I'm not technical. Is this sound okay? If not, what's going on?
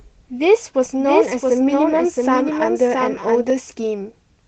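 No. From 0.84 to 3.5 s there's a doubled audio track: a quieter copy lags about 0.7 seconds behind, likely recorded twice. Unlike room echo, it doesn't fade; it starts and stops abruptly.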